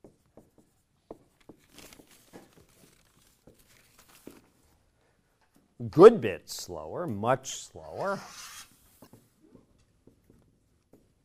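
At 9.03 s a brief glitch cuts into the sound and is gone by 9.07 s, a disturbance of about 40 ms that doesn't belong to the surrounding audio. This is damaged data in a compressed stream. A short stretch of the encoded bytes was corrupted, so the decoder read those frames as garbage or rejected them, lost its place, and had to hunt for the next valid frame header before normal playback resumed.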